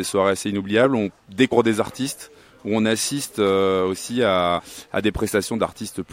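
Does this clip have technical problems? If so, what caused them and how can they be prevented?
Yes. There are two short bursts of damaged data in a compressed stream. The first is a blip at 1.51 s. The second runs from 4.58 to 4.60 s. In both places some bytes of the encoded file were corrupted, lost or overwritten. The decoder misread those frames and lost its place. It then hunted for the next valid frame header. That gap is heard as a brief chirp, squawk, click or short hole. Prevent it by transferring and storing the file with checksums, or by using a stream format with error detection so damaged frames are caught and resent.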